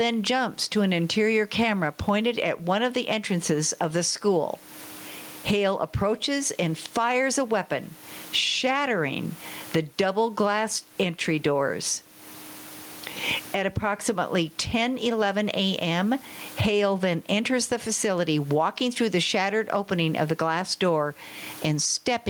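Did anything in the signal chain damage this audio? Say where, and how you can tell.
Yes. Gain pumping runs through the whole clip, at the input gain and limiting stage. The room noise sits about 38 dB below the speech, and the gain swings around 20 dB. The likely cause is input gain set far too high, with a fast limiter clamping it.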